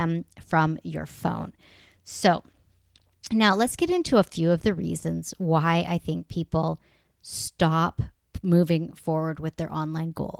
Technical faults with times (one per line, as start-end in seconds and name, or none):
none